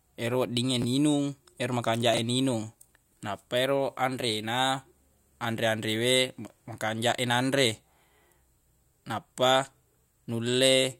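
At 0.82 to 0.84 s, a 10 ms chunk of the speech plays late, after the chunk that should follow it, a case of chunks out of order. At 2.14 to 2.18 s, between "ero makanjaq" and "e ninung", a 10 ms chunk is displaced by what sounds like about three chunk lengths. Nothing is missing, but the reordering creates hard joins, heard as a jumbled blip.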